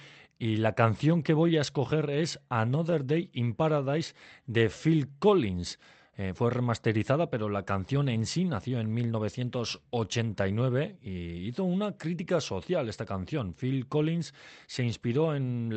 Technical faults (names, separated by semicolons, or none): clock drift between sender and receiver; repeated timing corrections